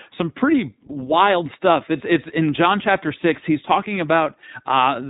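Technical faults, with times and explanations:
Throughout, iLBC codec: the speech is band-limited with nothing above 3.8 kHz, and its timbre is plainly rough and synthetic. iLBC codes the excitation of each 20 ms frame on its own rather than predicting it from the previous frame. The frame-by-frame approximation of the excitation is what gives voicing its buzzy, slightly artificial grain. The audible quality fits the codec's 15.2 kbps mode.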